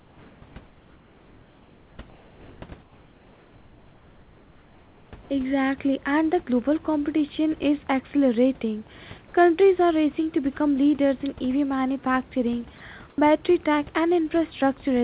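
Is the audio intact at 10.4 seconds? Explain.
Yes, the audio is intact at 10.4 seconds, with nothing heard there beyond the narrowband sound of the G.711 call path, which carries nothing above 4 kHz, and quiet room noise sitting about 29 dB below the speech.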